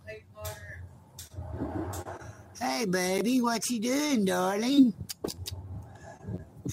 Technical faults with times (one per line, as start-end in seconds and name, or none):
0.00-6.72 crude rate conversion